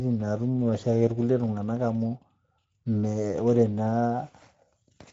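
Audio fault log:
Throughout: Speex codec. The speech has a clearly audible grainy, hoarse edge, the sound of a CELP coder without enough bits to rebuild the excitation cleanly. The artefacts point to a middle quality setting of roughly 17 kbps. Everything above 7.7 kHz is gone, and what remains above 4 kHz is a shaped, noise-like fill rather than real detail, which gives the top end a hissy, synthetic sheen.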